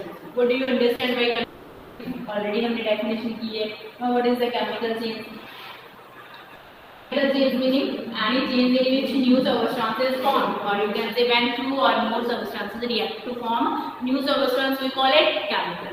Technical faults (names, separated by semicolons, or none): short concealed packet loss; long network dropout